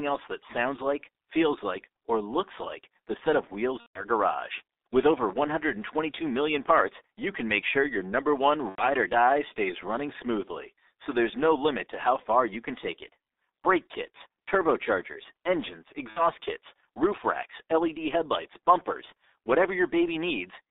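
G.723.1 codec, throughout: the 6.3 kbit/s coder, heard over a 300 Hz to 3.7 kHz line, leaves the speech heavily muffled and hoarse, with smeared consonants.

VoIP packet loss concealed by the speech codec, at 3.80 to 4.05 s after "the set of wheels", 8.69 to 8.86 s between "your number one" and "or die stays running", and 16.10 to 16.22 s between "kits turbochargers engines" and "kits roof racks": the decoder stretches the last sound into a fading buzzy tone or coloured noise, with gaps of 150, 90 and 60 ms.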